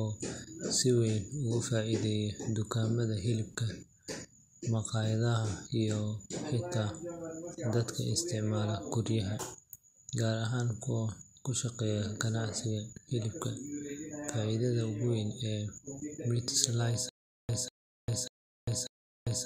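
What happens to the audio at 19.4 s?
At 19.4 s the speech is caught in a stutter with silent gaps, running from 17.09 s to the end of the clip. The playback likely stalled and, on each retry, replayed the same 193 ms fragment before going empty for about 399 ms, so the burst returns every 592 ms and the real continuation is lost. On a waveform, identical short blocks alternate with flat silent stretches; a spectrogram shows the same slice repeating between blank columns.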